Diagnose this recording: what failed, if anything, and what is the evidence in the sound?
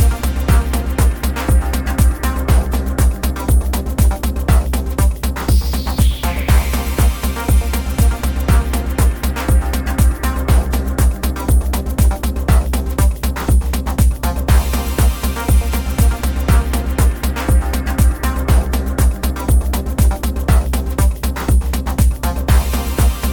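Nothing in the recording points to a failure at any stage, from the analogue wiring through to playback. No event anywhere in the audio calls for a diagnosis.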